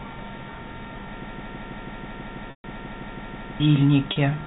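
From 1.24 s to 3.6 s the speech sticks in a broken-record loop: the same fragment of about 0.16 s plays back to back 14 times, and whatever should have followed is simply gone. The likely cause is a stalled player or stream resending the last buffer it held. Unlike packet-loss concealment, the repeats are exact copies of a whole chunk of speech, not a single held pitch cycle.

Inside that stretch, at 2.50 s to 2.64 s, a 140 ms gap is bridged by packet loss with pitch repetition, which fits about seven lost 20 ms packets. The last pitch period is repeated and fades out over roughly 50 ms, so it sounds like a buzzy held tone sinking into silence before a short cross-fade back. At 4.12 s a 40 ms loss, fitting two packets, gives only a brief, slightly buzzy hold. The telephone band of the G.711 coding cuts everything above 4 kHz throughout.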